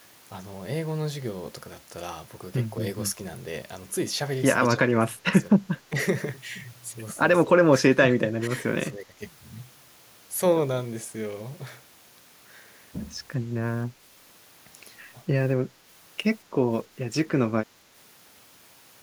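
Speech dips in bursts at 4.75, 5.56, 5.89, 7.46, 7.78 and 8.91 s, by up to about 20 dB. That's likely speech suppressed in double talk: the echo canceller couldn't separate the talker from the echo and ducked both.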